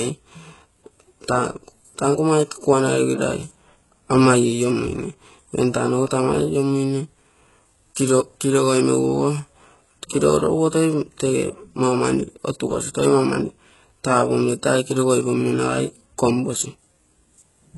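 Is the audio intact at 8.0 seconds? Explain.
No. A brief pre-echo sits at 7.95 s, just before 8.0 s. The codec spread its noise across the block, so a short hiss leads a smeared attack by about 13 ms. Throughout, the sound is likely HE-AAC compression. Nothing survives above 11.5 kHz, the rebuilt treble is gritty and metallic, and the heavy damage fits a bitrate near 12 kbps.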